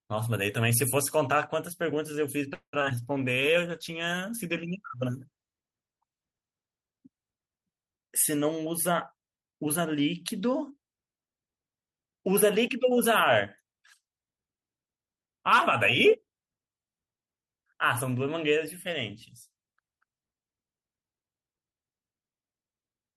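From 2.53 to 2.92 s the speech breaks into repeated packet loss with a robotic sound. Several packets went missing in quick succession, and each gap was patched by stretching out the last bit of sound. Concealment covers about 59% of that stretch, the longest gap is 197 ms, and roughly 80 ms simply drops out. It sounds choppy. On a spectrogram the harmonics freeze into flat, smeared bands with short blank slices. The waveform shows repeated, decaying copies of one cycle shape.

Starting at 2.99 s and lasting until 7.64 s comes a call bitrate drop. The encoder was pushed to spend far fewer bits, which fits a fall from 32 kbps to about 15 kbps, held at its lowest for about 3.8 s. With so few bits the coding turns coarse and the top end is trimmed, so the speech sounds muffled and watery. A spectrogram shows the energy above a few kHz cut away abruptly, with blotchy, grainy texture below that edge.

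Inside that stretch, from 3.25 to 3.69 s, a jitter buffer slow-down stretches the speech. The receiver was short of buffered audio and built a reserve by repeating single pitch periods, adding about 41 ms and playing at about 92% speed. The pitch stays put but the syllables drag. On a spectrogram the harmonics keep their spacing while features run slightly longer. The waveform shows near-identical periods doubled up.

Between 8.44 and 10.71 s a jitter buffer speed-up does the reverse. Too much audio had piled up in the buffer, so the receiver cut out short pitch-period pieces again and again, about 200 ms in all, running at roughly 107% speed. The speech sounds hurried while its pitch is unchanged. A spectrogram shows compressed syllables with unchanged harmonic spacing. The waveform has tiny seams where cycles were removed.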